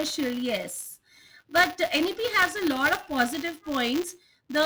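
A steady robotic buzz at 200 Hz rides on the speech for its whole length, present only while there is signal. This is buffer tearing: writer and reader of the ring buffer have slipped, so each 5 ms period carries a small slice of audio roughly 20 ms old, with hard joins on both sides.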